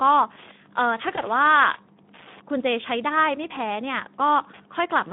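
Running under the whole recording there's Wi-Fi interference: a steady tick repeating every 102.4 ms, so roughly ten a second, sitting well down at roughly 25 dB below the speech. That's a nearby Wi-Fi radio's beacon being picked up and rectified by the audio circuitry, turning the RF bursts into an audible click train. It's quiet but very regular once you notice it, a faint metronome behind the talker.

The speech itself carries Speex codec damage from start to finish, and it's plainly audible. The sound is hoarse and grainy, with that CELP texture you get when the encoder doesn't have enough bits to model the excitation properly, which fits a bitrate around 11 kbps. The band is narrow, roughly 150 Hz to 3.6 kHz, so everything sounds boxed-in and telephone-like, with no real air above that.

Around 1.15 s there's VoIP packet loss concealed by the speech codec, and the disturbance runs to about 1.26 s. 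The gap sounds like a single lost 20 ms frame. The decoder filled it by extending its last pitch and filter settings at a falling gain, so you hear a brief, fading smear. Because each frame builds on the previous one, the speech stays thin and warped for roughly 90 ms after the gap before recovering.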